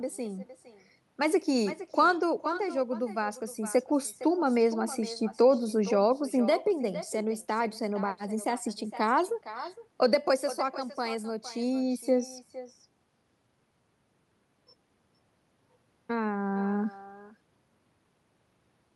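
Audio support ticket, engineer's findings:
Echo with no canceller, whole clip. Every phrase repeats about half a second later, roughly 15 dB down, thin. Far-end loudspeaker feeding its mic; no echo cancellation before return path. Versus room reverb: distinct delayed copy after a clear gap, not a tail smeared onto the original.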